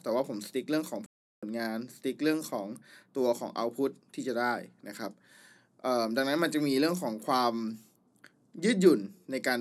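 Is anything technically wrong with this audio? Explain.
Yes. There is a Bluetooth stall from 1.06 to 1.43 s. The speech cuts to silence for 0.36 s, then resumes. The likely cause is radio interference delaying packets until the headphones' buffer ran empty, halting playback until the resent audio arrived.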